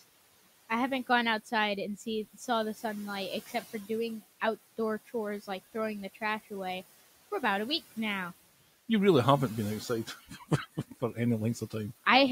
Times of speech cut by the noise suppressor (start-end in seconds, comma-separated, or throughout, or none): 10.07-10.51